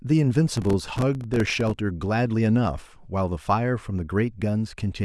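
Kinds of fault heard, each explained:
Processor overload crackle: the processor fell behind and missed dozens of buffer deadlines over a short stretch, each dropping a few milliseconds of audio to silence with hard edges, so from 0.56 to 1.78 s the speech is torn by a dense, gritty crackle.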